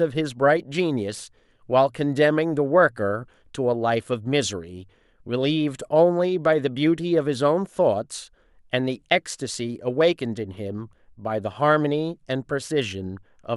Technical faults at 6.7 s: none

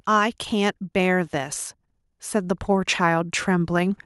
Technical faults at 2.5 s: automatic gain rising

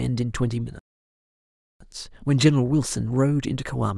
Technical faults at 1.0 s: playback stall

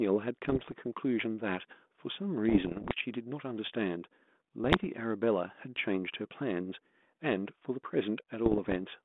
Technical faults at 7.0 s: none

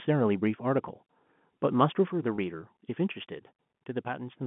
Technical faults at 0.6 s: none

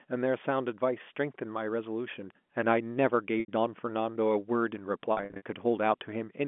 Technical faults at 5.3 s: packet loss with pitch repetition

